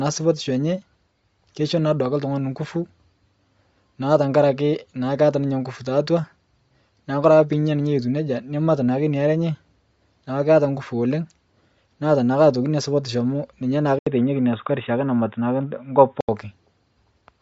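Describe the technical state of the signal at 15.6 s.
At 15.6 s the speech sits inside a stretch from 13.99 to 16.29 s where it sounds like an input switched to a poorer device, likely a change to another microphone or a headset's call profile. A gap of 80 ms opens at 13.99 s, then everything above 3.8 kHz vanishes and a faint new noise floor sits well below the speech. The level barely changes. Unlike codec damage, the narrowing arrives abruptly with a gap and lifts again at 16.29 s.

Throughout the clip, including this moment, there is plainly audible Bluetooth LC3 compression. This transform codec discards the upper spectrum at a modest bitrate and fills the gaps with synthetic noise, so the speech has a grainy, breathy edge and nothing above 7.7 kHz. The texture points to about 32 kbps with 10 ms frames. Unlike the device switch, this damage is constant across the whole clip rather than confined to one span.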